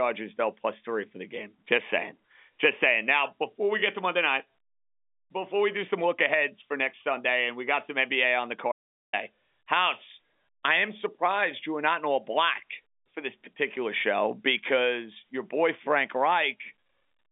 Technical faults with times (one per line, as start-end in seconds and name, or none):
8.72-9.13 audio dropout to silence